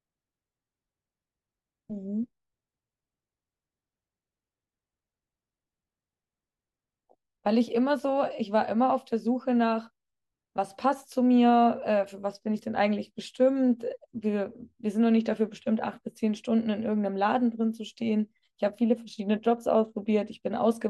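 No technical faults are audible.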